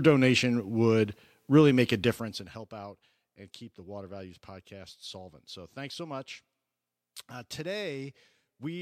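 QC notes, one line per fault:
2.02–2.66 s, zipper noise: just after "would really make a", the speech level drops by roughly 15 dB. The drop arrives as a rapid series of small gain steps, around a hundred a second, with no smoothing between them. Each jump leaves a tiny click, and together the clicks form a fine ticking texture riding on the speech until "out and keep the". A smooth fade would move the level without any ticking.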